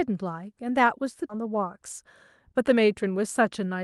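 At 1.29 s the speech makes a skip ahead: roughly 0.7 s of audio was discarded while later packets were already queued, so playback jumps forward with no fill. On the waveform the envelope splices abruptly. The spectrogram shows harmonic tracks breaking discontinuously at one vertical seam.

Right after, from 1.39 to 1.63 s, a jitter buffer speed-up plays the audio at 112% speed. The receiver cut out around 40 ms in pitch-period-sized pieces to shrink its backlog. A second speed-up runs from 2.54 to 3.75 s at 109%, removing about 100 ms. Both stretches sound hurried but keep the same pitch. On a spectrogram, harmonic spacing stays constant while syllables and formant movements compress in time. The waveform shows small splice irregularities. Throughout, the Opus call path confines content to below about 12 kHz, visible as an empty band above that.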